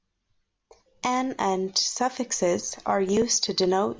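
Nothing goes wrong anywhere in this short bit of speech, so there's no technical fault to point to at any moment.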